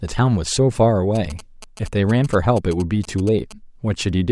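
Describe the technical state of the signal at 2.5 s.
At 2.5 s the speech is overlaid with GSM signalling bursts, running from 1.15 to 3.53 s: a nearby 2G phone transmits short radio bursts that the audio circuitry rectifies, producing a galloping dit-dit-dit of brief 217 Hz buzzes roughly 20 dB below the speech.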